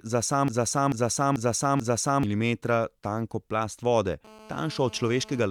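Speech clip with two faults. From 0.48 to 2.23 s a broken-record loop repeats one 0.44 s fragment four times back to back, likely a stalled player or stream, showing as identical repeating waveform blocks. From 4.25 to 5.46 s a GSM phone buzz at 217 Hz, about 22 dB below the speech and steady as during a call, appears as evenly spaced harmonic lines on the spectrogram.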